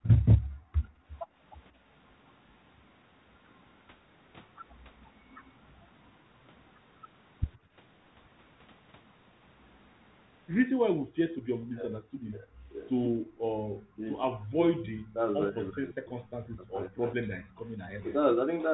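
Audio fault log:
0.03–0.08 s and 13.04–18.15 s, echo leak: a copy of the sound trails about 129 ms behind, roughly 10 dB down, likely residual loudspeaker echo the canceller missed. It is an added repeat, not a loss.
0.23–1.84 s and 7.57–13.67 s, background gated by the echo canceller: the room sound itself drops out, by about 32 dB and then about 39 dB, for roughly a second each time, while the far end plays.
11.53–18.05 s, speech suppressed in double talk: the talker's own sound dips by up to about 25 dB for roughly three seconds in total, likely because both sides spoke at once. The foreground is cut, unlike gating.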